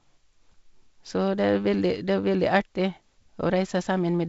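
No technical faults are audible.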